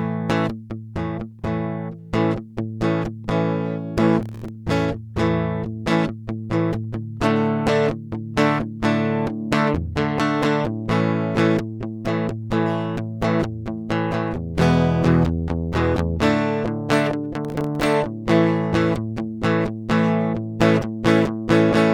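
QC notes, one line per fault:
4.23–4.48 s: processor overload crackle. A dense run of tiny dropouts to silence tears through the music. It sounds like very short buffers, a millisecond or two each, repeatedly missing their deadline, with each hard-edged gap adding to the grit.
17.45–17.86 s: processor overload crackle. The same gritty burst returns for about 0.4 s. Buffer deadlines are missed again and again, and each miss leaves a brief silent hole, until the load eases.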